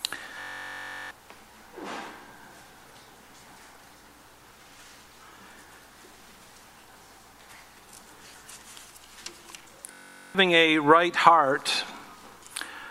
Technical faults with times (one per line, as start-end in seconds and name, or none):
0.41-1.11 system hang loop
9.92-10.35 system hang loop